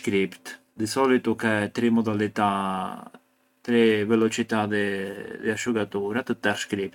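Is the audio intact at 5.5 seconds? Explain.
Yes, the audio at 5.5 seconds is intact, with no fault to be heard at that moment.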